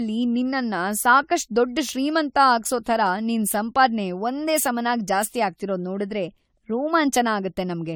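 Throughout the speech, the sound is swirly, smeared and hollow, with blurred consonant attacks. This is generation loss, likely from AAC-LC encoding repeated about seven times. A spectrogram shows nothing above 19.6 kHz, which fits 96 kbit/s.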